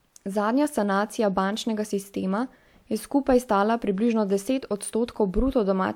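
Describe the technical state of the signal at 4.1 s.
At 4.1 s the speech signal is intact, with no audible fault at that moment.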